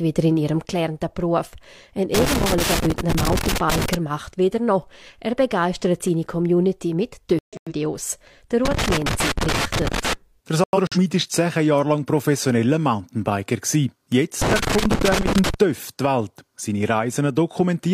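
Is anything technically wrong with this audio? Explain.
Yes, there are two kinds of fault.

Loose connector crackle occurs from 2.14 to 3.94 s, 8.65 to 10.13 s and 14.42 to 15.54 s. A worn or dirty contact keeps making and breaking, so the sound is chopped into irregular bursts of scratching. Unlike a codec fault, it is ragged and uneven, never a clean gap.

Corrupt frame muted occurs from 7.39 to 7.73 s and 10.64 to 10.97 s, each about 0.34 s long. Damaged compressed frames were rejected by the decoder and replaced with silence. Unlike the crackle, each hole is completely silent with abrupt edges, and the timing around it is kept.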